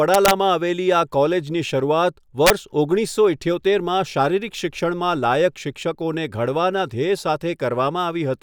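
At 0.14 to 0.31 s the speech breaks into harsh cracks from integer overflow, with peaks driven about 2 dB past the limit. It returns at 2.47 to 2.50 s, just before "ઓગણીસો ઈઠ્યોતેરમાં શારીરિક", about 3 dB over. Instead of flattening at full scale, each excess peak wraps to the opposite extreme, so the crack is abrupt and violent rather than the buzzy flattening of clipping.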